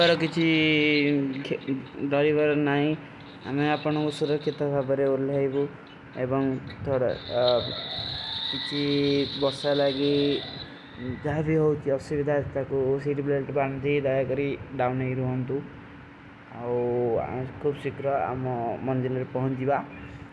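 No technical faults can be heard in this speech recording.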